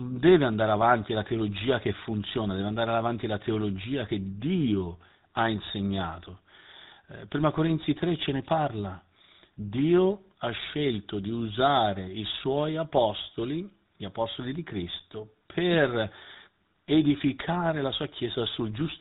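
Throughout the speech, the audio has passed through the GSM full-rate codec, consistent with a 13 kbps phone link. It rebuilds the voice from a vocal-tract model driven by sparse pulses, cutting everything above 4 kHz and leaving a plainly audible buzzy, gravelly roughness.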